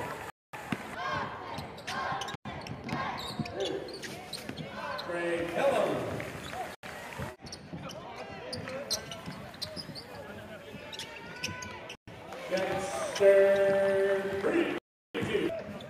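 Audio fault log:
0.30–0.54 s, 2.35–2.45 s, 6.75–6.83 s, 11.95–12.08 s, 14.78–15.15 s, Bluetooth stall: the sound drops to silence for 234, 99, 84, 124 and 363 ms, then resumes. This is likely a wireless link delaying packets, so the receiving buffer empties and playback halts until retransmissions arrive.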